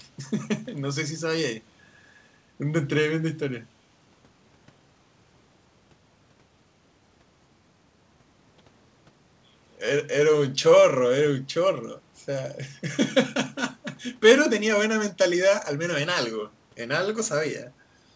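No technical faults can be heard in the speech; it shows only the expected coding character of a wideband call path, with nothing above 8 kHz, which fits a G.722 codec at 64 kbps.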